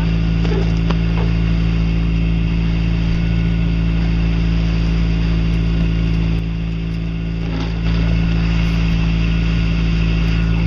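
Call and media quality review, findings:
Sudden gain jump, 6.39 to 7.85 s: level drops about 4 dB in one step, then returns, likely a digital gain setting applied without a ramp. Sound and background noise fall and recover together, no fade at either edge.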